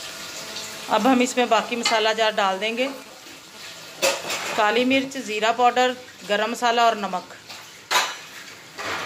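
From 0.37 to 3.03 s, a GSM phone buzz sits under the sound. A nearby 2G phone is in a call, bursting at 216.7 Hz. The audio circuit rectifies those radio pulses. The result is a hard, raspy buzz, about 22 dB below the signal.

From 3.06 to 4.20 s, GSM signalling bursts take over. The phone is still in the call, but its user has gone silent. It now sends only short groups of bursts. These are heard as even ticks with a longer 216.7 Hz buzz twice a second, roughly 20 dB down.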